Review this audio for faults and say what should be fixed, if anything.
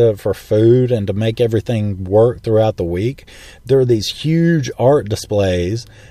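No faults; nothing to fix.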